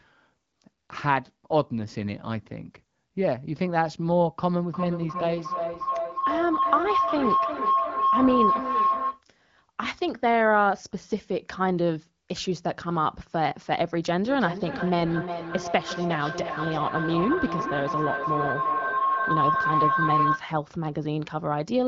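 At 4.7 s a feedback howl starts and runs to 9.24 s. It returns from 14.24 s to 20.49 s. Sound from a loudspeaker reaches a microphone on the same call and loops back louder each trip. The repeats build instead of dying away. They narrow to a tone around 1 kHz, with the loop coming round roughly every 0.4 s. At its peak it sits about 2 dB above the speech the first time and about 1 dB above it the second time.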